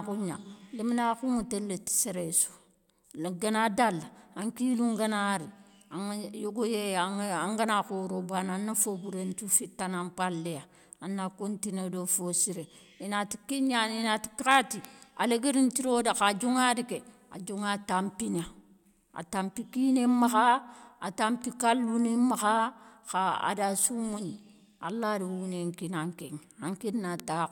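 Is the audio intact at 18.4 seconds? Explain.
No. At 18.39 s a bit error spike occurs: a single flipped bit in memory or on a digital link throws one sample off by a power of two before it returns, producing one sharp, broadband tick, peaking near about -19 dBFS, unrelated to the speech.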